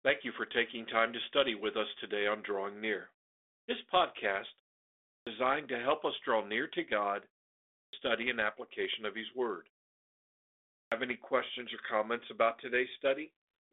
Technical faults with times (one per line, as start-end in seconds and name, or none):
5.00-5.27 clipped start after a pause
7.66-7.93 clipped start after a pause
10.60-10.92 clipped start after a pause